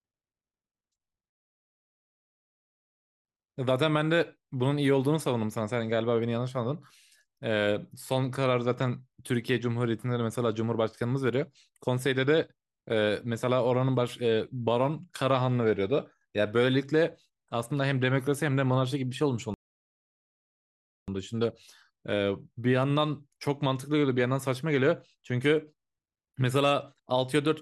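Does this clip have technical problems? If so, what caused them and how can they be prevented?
Yes. Two playback stalls, likely from the player running out of buffered data or having its thread blocked, cut the speech to silence from 1.30 to 3.25 s (about 1.9 s) and from 19.54 to 21.08 s (about 1.5 s) before it resumes. Keeping a deeper playback buffer and running audio output on a high-priority thread that nothing else can block prevents this.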